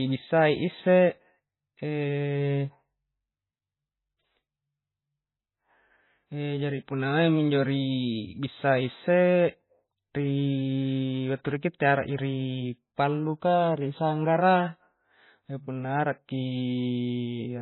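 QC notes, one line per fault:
Throughout, MP3 compression: the speech sounds dull and watery, with nothing above 4 kHz and swirly smearing on s sounds and attacks. The likely cause is heavy MP3 encoding at a very low bitrate, around 16 kbps, which cuts treble and drops weak frequency lines frame to frame.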